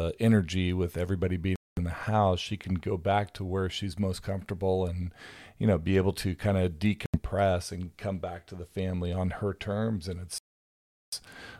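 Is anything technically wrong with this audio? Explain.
Yes. The speech drops to silence three times: at 1.56 to 1.78 s, between "energy with everybody being" and "the house she can"; at 7.06 to 7.17 s, between "able to kind of" and "and come back to"; and at 10.38 to 11.13 s. These gaps last about 0.21, 0.08 and 0.74 s. They are most likely Bluetooth stalls, where held-up packets let the headphone buffer run dry. On a waveform each gap is a flat line, and on a spectrogram it is an empty vertical band before speech resumes.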